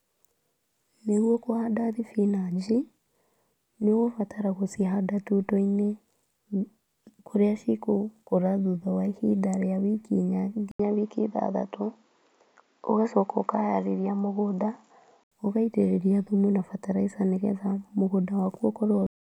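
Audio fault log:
10.71 to 15.32 s, input switched to a poorer device. An 80 ms gap, then the speech turns dull, with nothing above 7.3 kHz and faint new noise. Likely another microphone took over.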